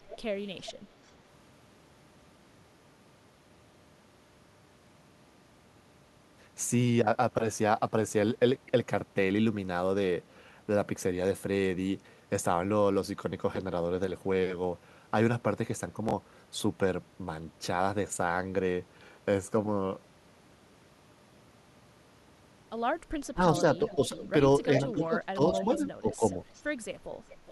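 At 0.09–0.17 s there is a brief echo leak: a faint copy of the speech returns about 405 ms late, roughly 20 dB below it. This is likely a far-end loudspeaker echo that the echo canceller failed to remove. On a spectrogram it appears as a weak, delayed duplicate of the harmonic pattern.

At 16.09–16.13 s and 17.13–17.17 s, chunks play out of order. In each case a 21.33 ms chunk lands one chunk late, so the audio briefly jumbles. The waveform shows three abrupt discontinuities at each spot, and the spectrogram shows thin vertical broadband lines.

From 23.33 to 24.11 s, speech is suppressed in double talk. The level dips by up to about 20 dB, roughly 200 ms in total. This is likely the echo canceller turning everything down while both sides talk. The waveform envelope sags.

Overlapping that, echo leak returns at 23.59–24.28 s (about 15 dB down), and again shortly after at 24.86–24.91 s (about 20 dB down). 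Both arrive about 412 ms late and show as ghost harmonics offset by roughly 0.4 s.

From 24.92 to 26.22 s, suppression in double talk recurs, with drops of up to about 15 dB across roughly half a second. The signal dips, visible as notched envelope segments.

Echo leak follows again at 25.59–25.77 s (about 10 dB down, the most audible), 26.12–26.64 s (about 20 dB down) and 27.29 s to the end (about 25 dB down). Each returns around 412–413 ms after the original, as a delayed double.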